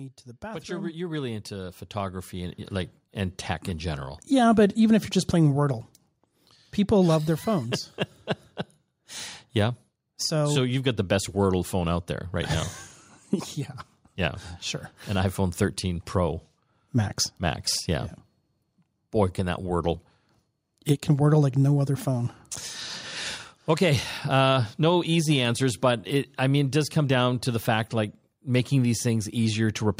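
Right at the start, from about 0.4 s to 4.57 s, you can hear automatic gain rising. The gain control decided the input was too quiet and pushed its gain up bit by bit, about 14 dB in total over those four seconds. So the speech and the room noise behind it swell up together, starting just after "to the" and settling by "but even if you're".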